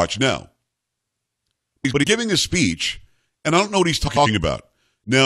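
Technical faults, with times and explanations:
1.85–2.04 s and 4.07–4.27 s, frames out of order: two adjacent blocks of about 93 ms swap places, which fits four-frame runs, just before "giving a speech and" and just after "don't know what he's". Each stretch plays its halves exchanged. That gives a garbled flutter. No time is lost.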